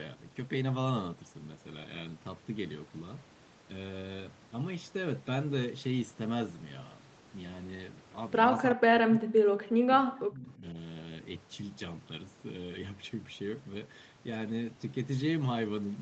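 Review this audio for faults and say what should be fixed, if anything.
From 8.71 to 10.76 s the speech level repeatedly drops away, at its deepest by roughly 40 dB, with around a second and a half of the span cut down in pieces. The likely cause is speech suppressed in double talk: with both ends talking, the echo canceller could not tell the near talker from loudspeaker echo and attenuated both. The band stopping near 8 kHz is expected from the call path. Prevent it by tuning the canceller's double-talk detection to favour near-end speech.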